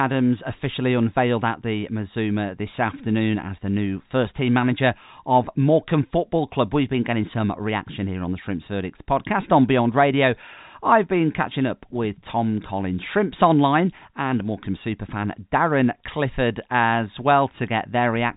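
Speech carried over G.711 A-law telephone coding at 64 kbps, which leaves no content above about 3.8 kHz, shows no technical faults.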